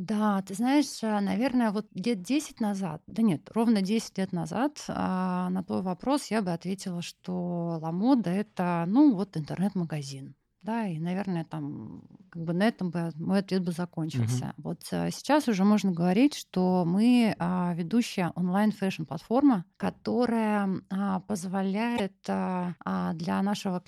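Damaged data in a compressed stream disrupts this speech clip from 21.93 to 22.00 s. A short run of the encoded stream is corrupt there, so the decoder misreads or rejects those frames, loses sync and hunts for the next valid frame header, producing a brief blip.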